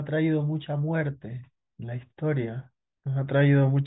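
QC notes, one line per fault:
No faults to note.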